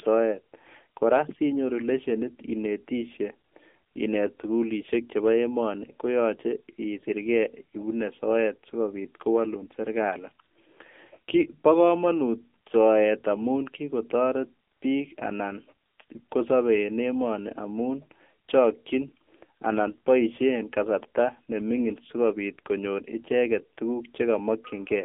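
AMR narrowband mobile codec damage throughout: speech is squeezed into a 250 Hz to 3.5 kHz band, nothing above 3.6 kHz, with buzzy, synthetic vocal-tract modelling suggesting roughly 8 kbps.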